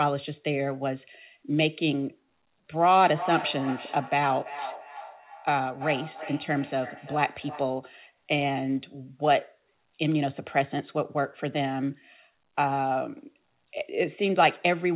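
From 3.03 to 7.85 s there is feedback echo between two devices: a second device in the room replays the call into a microphone, so speech returns roughly every 300 ms, thinner and more ringing each pass, peaking about 12 dB down. Unlike reverberation, the repeats are distinct copies.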